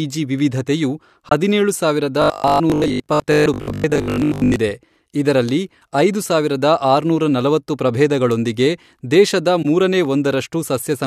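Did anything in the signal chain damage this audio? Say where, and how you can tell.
Yes, in three places. At the codec stage there are two corrupt frames concealed: a short fault at 1.29 to 1.32 s, just before "ಹದಿನೇಳು ಸಾವಿರದ", and another at 9.62 to 9.66 s, right after "ಆರುನೂರ ನಲವತ್ತು ಪ್ರಭೇದಗಳೊಂದಿಗೆ ದೇಶದ". Each spans about one AAC frame. The decoder caught the damaged bits and papered over them instead of letting them squeak through.

From 2.22 to 4.56 s, right after "ವಿವಿಧತೆಯು ಹದಿನೇಳು ಸಾವಿರದ", the speech turns into robotic sound from repeated short buffers. There's a rigid metallic buzz locked at 50 Hz, which fits a 20 ms chunk being replayed over and over. Most of that stretch is recycled audio, with the real signal skipped, so the speech only loosely tracks the buzz. This is likely a driver or buffer underrun, with fresh data arriving too seldom.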